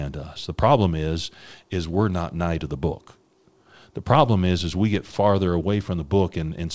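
Listening to this speech recording, which carries the character of a wideband call path with no content above 8 kHz, nothing stood out as a technical problem.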